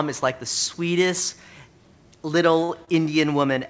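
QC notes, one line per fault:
2.64–2.71 s and 2.85–2.90 s: short stall from a late packet, twice. Each time the jitter buffer ran dry and the receiver stretched the last sound, by 47 ms and then 29 ms, before resuming where it left off. Nothing is lost, but the sound is briefly held with a slight buzz or dip.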